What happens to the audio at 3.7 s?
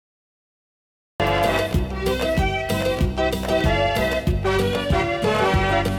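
Nothing goes wrong at 3.7 s; the audio there plays through intact, with no dropout, click, glitch or other fault.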